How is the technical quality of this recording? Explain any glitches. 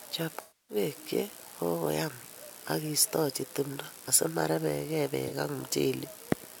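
The speech is marred by two dropouts, both AAC frame loss with concealment. From 0.41 to 0.76 s, just before "che kakoyam akiistoji timdo", roughly 0.28 s of coded audio is missing, which fits about 13 lost frames. The decoder repeats the last good spectrum with randomised phase, so the sound turns smeared and noisy, sags in level, then recovers. On a spectrogram the harmonics blur into a flat, decaying smudge. A shorter gap at 5.27 to 5.33 s, after "kakoyam akiistoji timdo asimorebegei", is a brief phasey blip, visible as a narrow smeared strip on the spectrogram.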